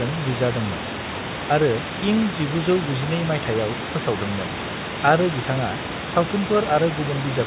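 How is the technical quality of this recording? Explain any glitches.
No glitches can be heard anywhere in the recording. The speech has the narrow, telephone-like band of a call path, with nothing above 4 kHz, which fits a G.711 mu-law codec at 64 kbps, and the room noise sits about 10 dB below the speech.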